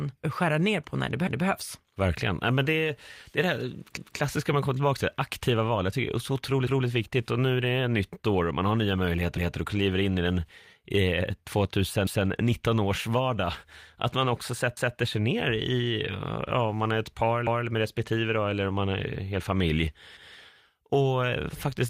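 At 1.27 s, just after "ner på när det", the first overlapping chunks fault appears. The audio was handled in blocks that fit 2.5 s chunks. Each new block starts 200 ms before the previous one ends, so that 200 ms plays twice. It is heard as a stutter at the join.

At 2.01 s comes a lost packet rebuilt from error correction. One 20 ms packet went missing. The decoder played a low-bitrate copy carried in the next packet. There is no gap, but that moment sounds rougher and noisier.

At 3.97 s the chunk overlap repeats, between "det är det här" and "man kommer tillbaka till". Another 200 ms section is doubled. It returns at 6.67 s and 12.07 s.

At 12.51 s, just before "års vardag", a second single 20 ms packet is rebuilt the same way. Again there is no dropout, only a brief rough, noisy patch.

At 14.77 s the last overlapping chunk join doubles another 200 ms and stutters again.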